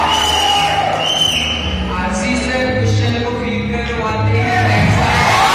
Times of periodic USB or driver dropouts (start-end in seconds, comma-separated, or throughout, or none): 1.10-5.09